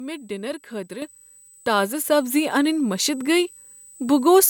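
A switching supply whistle runs through the whole speech clip: a thin, high tone wandering between about 7.91 and 8.23 kHz, sitting roughly 25 dB under the speech. A switch-mode power supply is running in an audible burst mode, or beating against another supply. Its frequency shifts as the load it feeds changes, so the tone slides instead of holding one pitch.

At 1.02 s the microphone volume is stepped up by about 8 dB in a single jump. The call software judged the input too quiet and raised the device's capture gain all at once, with no gradual ramp. The speech, the background noise and the whistle all become louder together at that instant. The change lands abruptly mid-stream, so the level clearly shifts in one step.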